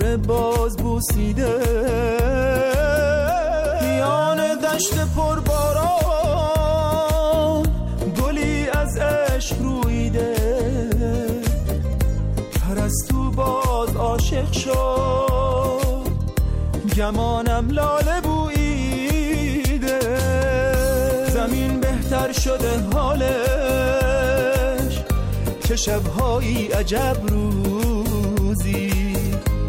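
No technical faults can be heard at any point in the audio.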